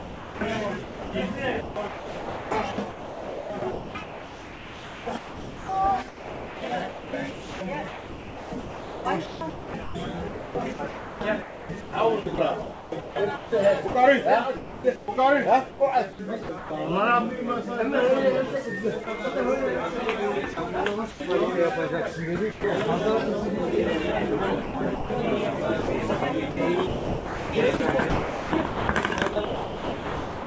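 From the start to 16.7 s the sound is chopped by the voice detector: the sender likely kept switching transmission on and off, so about 9.1 s of quiet passages became comfort noise. At 19.04 to 19.07 s, a 30 ms piece is likely dropped by the voice detector and replaced by steady noise before the sound returns. From 20.54 to 21.2 s the chopping recurs briefly, with 120 ms swapped for fill in two or more short gaps. At 22.52 to 22.64 s a single 120 ms stretch gives way to comfort noise, one continuous hole rather than a flicker. From 24.62 s to the end the chopping resumes, and about 2.8 s is replaced. Throughout, the wideband call codec leaves nothing above 8 kHz.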